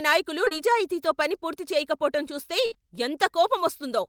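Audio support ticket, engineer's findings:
Short concealed packet loss at 0.45–0.49 s and 0.49–0.53 s, back to back, plus 2.73–2.77 s. Brief smear or wobble in the speech. About 20 ms missing each time, bridged by receiver concealment extending the last pitch or noise, then crossfading back.

Burst of packet loss at 2.66–2.73 s, roughly 60 ms of speech gone. Concealment holds the last sound as a fading buzz or hiss, then audio resumes further on. Probable component: network path feeding the jitter buffer, packets lost or arriving too late.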